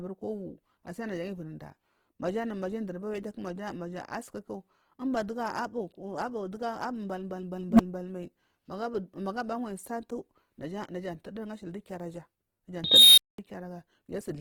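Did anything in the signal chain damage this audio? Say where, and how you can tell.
Yes. Throughout, the speech has a grainy, rough texture with noisy hash on the harmonics, yet the full bandwidth survives. That points to the codec stage, likely Opus compression in its music (CELT) mode, with band energies kept but detail replaced by noise at a low rate near 16 kbps.

The processing stage has an unstable filter, heard twice. At 7.69 to 7.80 s, a low tone around 200 Hz swells over roughly 98 ms, then cuts to about 10 ms of silence. At 12.84 to 13.38 s, a squeal near 4 kHz grows over about 334 ms, clips, and drops into about 210 ms of silence. A recursive filter's output ran away and overflowed before resetting.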